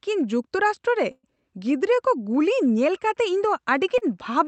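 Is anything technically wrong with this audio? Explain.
Yes, there are two playback interruptions in this speech.

From 1.11 to 1.26 s there is a call audio freeze. The last sound carries on as a fading buzz or hiss for about 120 ms, drops to roughly 30 ms of silence, then resumes exactly where it stopped, so nothing is lost but timing slips. Likely cause: packets were held up in transit and the jitter buffer ran empty.

From 3.98 to 4.04 s there is a short stall from a late packet. One sound is held about 33 ms too long with a slight buzz or dip, because the receiver stretched it while waiting for an overdue packet, then continued without losing anything.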